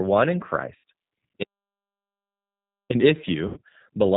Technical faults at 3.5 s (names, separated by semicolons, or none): G.729 codec; VoIP packet loss concealed by the speech codec